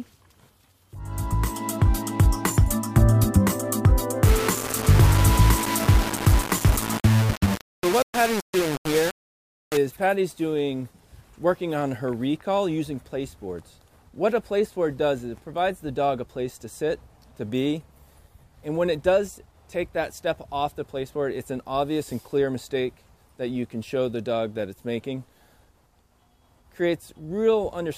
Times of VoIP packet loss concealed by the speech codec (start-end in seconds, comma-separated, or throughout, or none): none